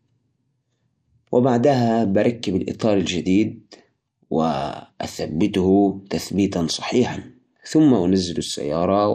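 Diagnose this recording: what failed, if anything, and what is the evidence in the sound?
The speech has plainly audible codec damage from start to finish: it is dull, with a gurgling, granular roughness. This is likely MP2 compression at a starved rate, consistent with roughly 80 kbps. Layer II divides the signal into 32 equal sub-bands and rations bits among them. Short of bits, it shuts off upper bands and quantises the rest coarsely. On a spectrogram, the high bands flicker on and off as blocky patches, and the top end is missing.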